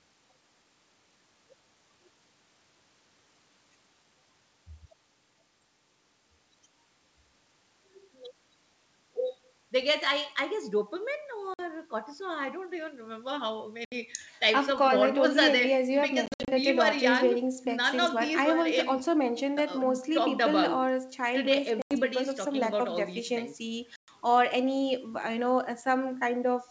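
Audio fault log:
11.54 to 24.12 s, packet loss on an ADPCM call: packets dropped at 11.54 s (50 ms), 13.85 s (70 ms), 16.26 s (150 ms scattered over 220 ms), 21.82 s (90 ms) and 23.96 s (120 ms). The decoder's predictor and step size lose sync, so each hard-edged silent gap is followed by brief distortion.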